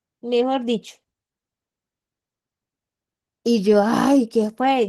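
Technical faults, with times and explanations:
throughout, Opus voice compression: the speech has a clearly coded, slightly hoarse and synthetic edge, which fits a low bitrate around 16 kbps. It sounds like hybrid coding, with linear prediction handling everything below 8 kHz and a sparsely coded layer stretching the highs to full band.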